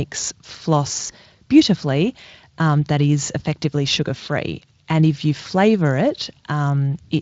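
Speech with VoIP packet loss concealed by the speech codec from 1.07 to 1.15 s. A single lost 20 ms frame is filled with a brief fading extrapolation rather than the clean silence of a dropout, and the Speex coding stays lightly coloured throughout.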